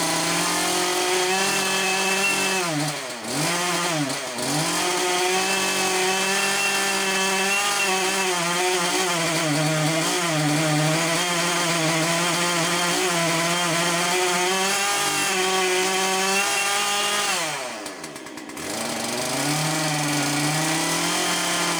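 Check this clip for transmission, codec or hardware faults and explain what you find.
One fault is present throughout: crude rate conversion. Samples appear to be dropped without filtering, consistent with 48 kHz to 44.1 kHz, leaving inharmonic gritty fizz roughly 15 dB below the signal on loud, bright passages.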